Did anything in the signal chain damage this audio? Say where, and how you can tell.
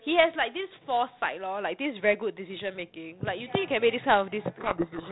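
Yes. From 4.6 s to the end, the speech is suddenly buried in harsh distortion. This is a codec payload misread: the decoder takes the G.726 code words in the wrong bit order, so every ADPCM step it rebuilds is wrong, unlike the light, band-limited 32 kbit/s coding before it.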